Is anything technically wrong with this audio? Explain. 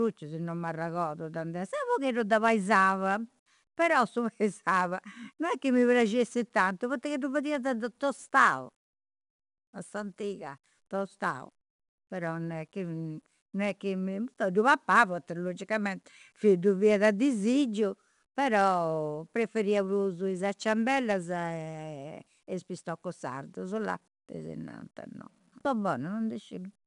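Yes. The speech carries 4-bit ADPCM compression from start to finish. Each sample is coded as a small 4-bit step from a predicted value, so the coding error becomes a gritty, plainly audible hiss that rises and falls with the speech and roughens sharp onsets. On a spectrogram, broadband noise fills the gaps between harmonics during loud passages, and nothing appears above 10.7 kHz, which fits a sample rate near 22 kHz and a bitrate around 89 kbps.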